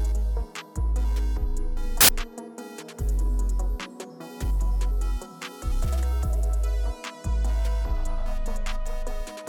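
From 2.01 to 2.09 s the audio bursts into loud, harsh broadband noise, samples built from the wrong bytes: misassembled bytes lift the low bits, unlike clipping, which flattens the waveform's peaks.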